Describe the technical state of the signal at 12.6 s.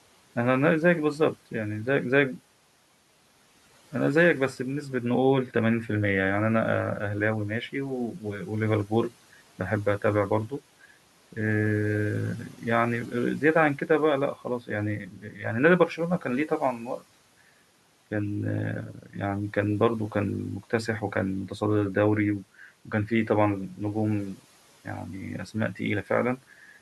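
At 12.6 s the speech is cut by the noise suppressor. The fault runs from 12.5 to 12.62 s. The suppressor mistakes a soft stretch of speech for background noise and pulls its gain down, by about 10 dB at the deepest point. Roughly a tenth of a second of sound is affected. It comes across as swallowed and faint, while the room noise sits about 26 dB below the speech.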